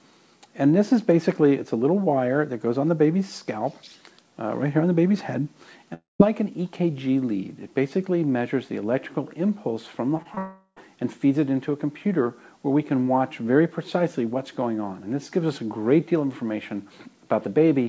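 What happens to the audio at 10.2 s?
Short concealed packet loss hits twice, at 10.17 to 10.20 s and again at 10.22 to 10.27 s, with about 20 ms missing each time. Those pieces arrived too late for the decoder, so the receiver improvised, extending the preceding sound from its pitch or as shaped noise, then crossfading back into real audio. The result is a quick smear or wobble, heard through the G.722 call path's band ending at 8 kHz.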